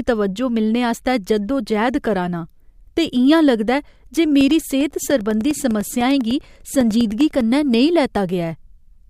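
From 4.41 s to 7.41 s the speech is hit by periodic USB or driver dropouts: a gap roughly a millisecond long every 0.1 s, so about ten per second and around thirty in all. Each time, something on the host stalls the USB bus or audio driver, and the missing slice is filled with silence. The result is a steady train of small ticks riding on the speech, audible only where there is signal.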